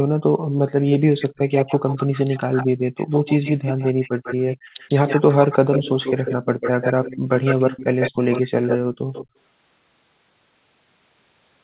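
From 0.04 to 1.41 s, background gated by the echo canceller: the room sound drops by up to about 40 dB in brief holes. On a waveform, the noise floor falls to near-silence and then snaps back.

From 0.57 to 9.28 s, an echo leak is heard: a copy of the speech trails it by 145 ms at about 5 dB below the speech. This is likely residual loudspeaker pickup that the far end's canceller missed. On a spectrogram, each harmonic pattern appears twice, offset by 145 ms.

The same gating recurs at 2.67–2.82 s (about 40 dB), 3.65–4.77 s (about 31 dB), 6.38–6.6 s (about 11 dB, shallow) and 8.15–9.12 s (about 40 dB). Each shows as a dark gap in the background across the whole band, which stops at 4 kHz because of the G.711 call path.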